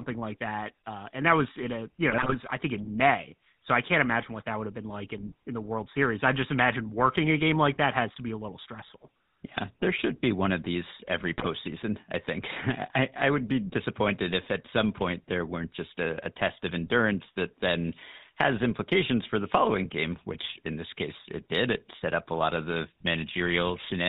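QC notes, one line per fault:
throughout: GSM full-rate codec. The speech carries a plainly audible buzzy, gravelly roughness and a dull top end, with nothing reaching above 4 kHz. This is the mark of the old full-rate GSM coder at 13 kbps: it imitates the vocal tract with a filter and feeds it a coarse excitation made of regularly spaced pulses, keeping only one sample in three, so the fine texture of the voice is replaced by a rasping, synthetic grain.
2.10–2.35 s and 11.38–11.47 s: GSM bit errors. In both spots the speech briefly breaks into squawks, pops and a gargling smear, the first burst lasting about a quarter of a second and the second under a tenth. Corrupted bits are reaching the speech decoder, at a rate of around 2.6 and 2.8 percent, so the filter, pitch and gain values for the hit frames come out wrong, twisting the spectrum or jolting the level frame by frame.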